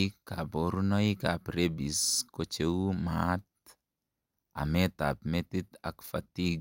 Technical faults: repeated frames

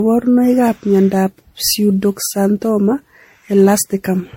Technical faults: generation loss

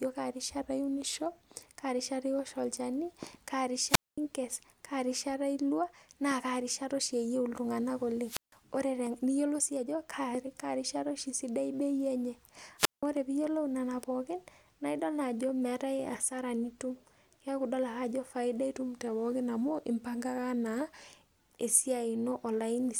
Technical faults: drift correction step; wireless microphone squelch dropout

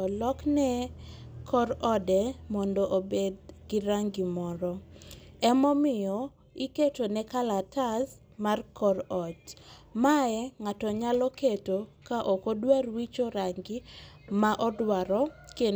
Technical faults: none

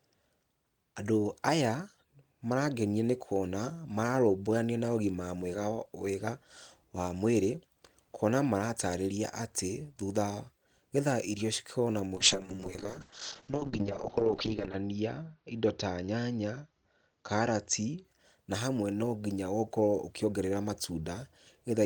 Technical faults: call bitrate drop

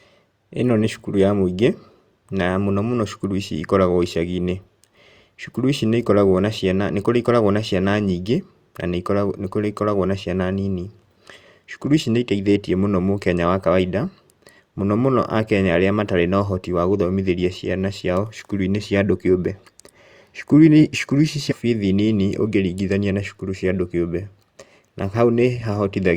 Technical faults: stream segment skipped

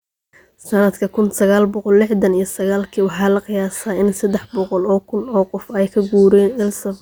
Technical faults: none

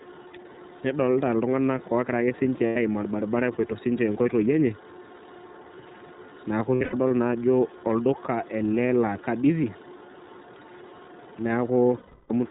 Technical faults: iLBC codec; lost iLBC frames

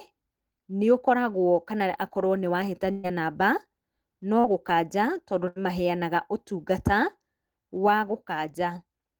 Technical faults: burst of packet loss; short concealed packet loss

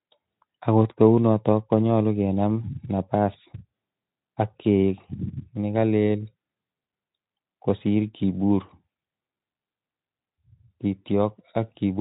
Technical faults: none

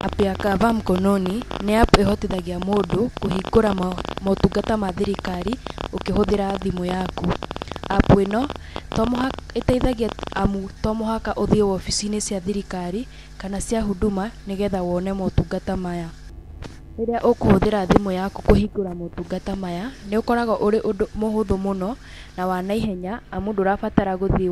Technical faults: train of clicks

